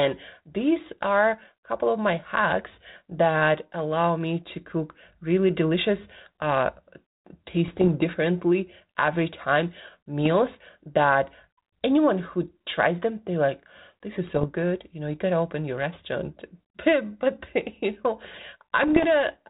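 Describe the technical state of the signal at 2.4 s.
At 2.4 s the speech is intact, with no fault, and the only trace of the 32 kbit/s G.726 ADPCM path is its light telephone-band coding character.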